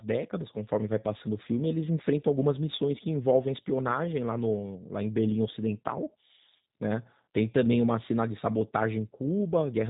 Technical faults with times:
0.00-9.90 G.729 codec

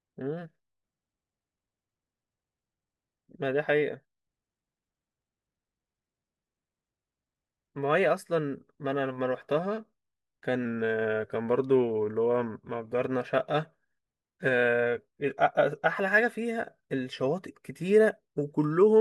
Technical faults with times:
10.65-12.91 drift correction step

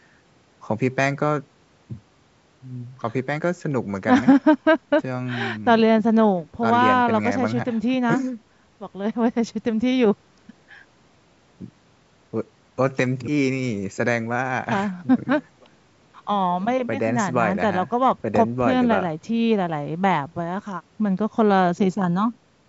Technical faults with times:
none

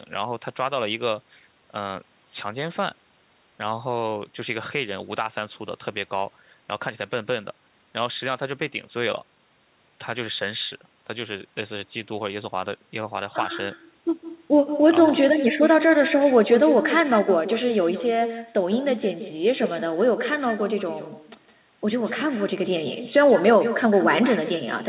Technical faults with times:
0.00-24.88 echo with no canceller

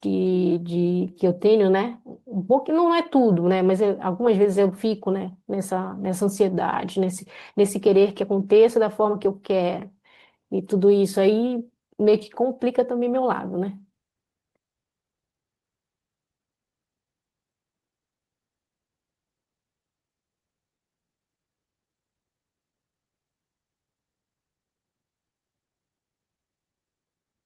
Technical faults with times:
0.00-27.46 clock drift between sender and receiver
0.05-27.46 repeated timing corrections

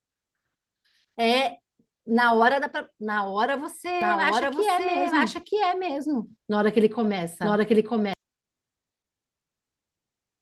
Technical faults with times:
4.01-8.13 doubled audio track

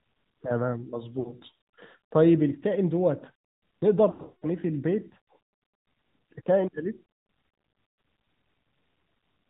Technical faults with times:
0.00-9.49 AMR narrowband mobile codec
1.20-1.34 lost AMR speech frames
4.10-4.46 lost AMR speech frames
7.84-8.04 lost AMR speech frames

